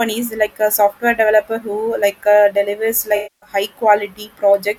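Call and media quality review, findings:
Smeared, noisy patch in the speech from 3.16 to 3.50 s, sinking toward silence, then fading back in. AAC frame loss with concealment in the decoder. It rebuilds the gap from the last good spectrum with scrambled phase. About 0.26 s of audio is missing, which fits a run of roughly a dozen frames.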